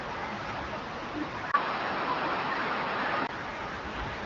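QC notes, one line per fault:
1.52 to 3.29 s, input switched to a poorer device: After a 20 ms gap, the speech turns dull and boxy. Nothing reaches above 5.6 kHz. The level shifts by a few dB, and a faint new noise floor appears. A narrower-band microphone likely took over.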